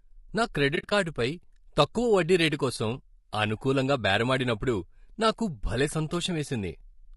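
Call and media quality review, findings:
Low-delay AAC compression, throughout: likely AAC-ELD at a low bitrate, roughly 32 kbps by ear. Short frames resolve harmonics poorly; speech rough and grainy, noise filling gaps between harmonics.

AAC frame loss with muting, 0.75–0.92 s: decoder zeroed lost frames, about 100 ms missing across 160 ms, longest hole a few tens of ms. Overlapping windows fade out and in, giving soft-edged dropouts.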